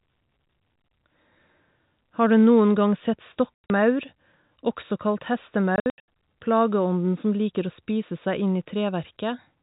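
Just after "gang sett", from 3.55 to 3.70 s, the speech breaks into hard-edged holes, and again from 5.76 to 6.08 s. This is packet loss filled with silence: the gaps, the longest about 100 ms, point to 20 ms packets, over band-limited G.711 telephone audio.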